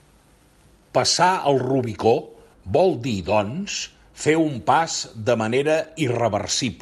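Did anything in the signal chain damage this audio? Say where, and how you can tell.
No, nothing in the signal chain damaged this audio; the speech came through a WebRTC call path working normally, using Opus at 64 kbps with its bandwidth set to 12 kHz.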